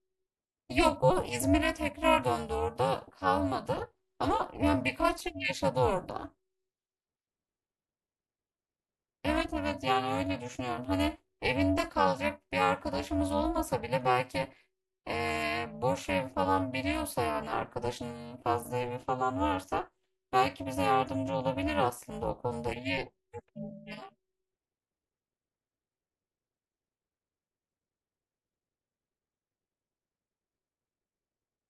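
From start to finish the speech carries a harsh, metallic buzz, the level pumping around 400 times a second with swings of about 60 dB. That is overlap-add ripple: windowed frames were recombined with overlaps whose gains fail to sum evenly, so level dips every frame.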